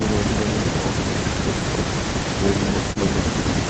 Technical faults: none

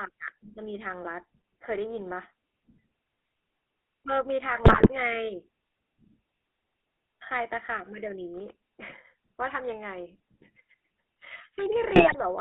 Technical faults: GSM full-rate codec; GSM bit errors

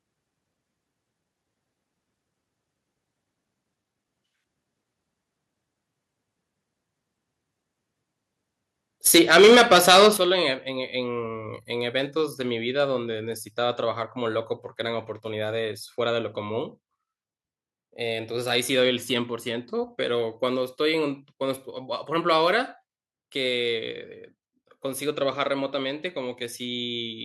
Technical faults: microphone overload; microphone volume stepped down

